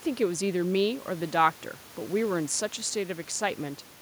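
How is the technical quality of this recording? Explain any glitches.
No glitches can be heard anywhere in this recording.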